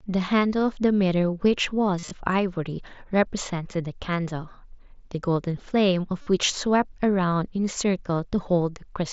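This speech clip comes through a wideband mSBC Bluetooth headset link, which caps it at 8 kHz. It has two bursts of concealed Bluetooth headset packet loss. From 1.99 to 2.11 s, about 82 ms of audio is missing, scattered over 120 ms. The longest gap is 37.5 ms. From 6.21 to 6.27 s, about 52 ms drops out. In each gap the phone repeats a short stretch of recent waveform. This gives a brief buzzy tone and a small warble as real audio returns.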